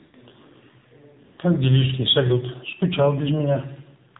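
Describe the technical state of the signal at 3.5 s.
AMR narrowband mobile codec damage is present at 3.5 s, as it is across the whole clip. The speech is cut off above 4 kHz and rebuilt from a vocal-tract model driven by sparse pulses, giving a plainly buzzy, synthetic sound that fits a low mode near 7.4 kbps.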